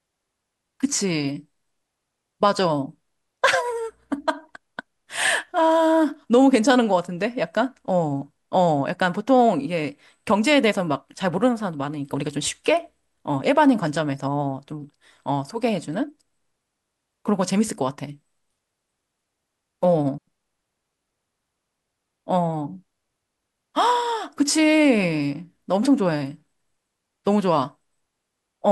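At 20.18 s the speech cuts out in a digital wireless dropout. The receiver lost too much of the incoming data stream and muted its output rather than play corrupted audio. The gap lasts about 94 ms, ending at 20.27 s. It sounds like a clean hole of near silence. There is no crackle or burst of noise at either edge. The mute fades in and out very quickly, so the break is abrupt.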